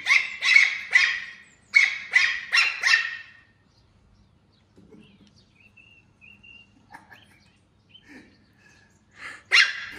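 From the very start until about 2.52 s there's a doubled audio track: a second, full-band copy of the sound running roughly a second behind and at about the same level as the original. It's already under way when the clip opens and stops abruptly at 2.52 s, with no decay or room colour on it. That's likely a second capture path running slower, or an edit holding two copies out of step.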